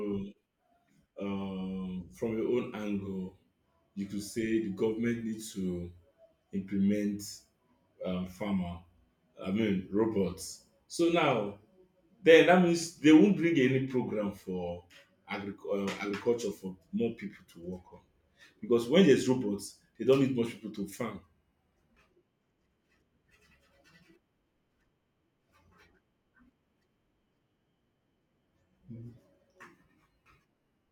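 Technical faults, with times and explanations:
21.23–22.28 s (just after "people to farm") and 29.64–30.91 s, drift correction step: speech abruptly slows about 6% and drops about a semitone, then snaps back the first time, likely a clock-matching rate change.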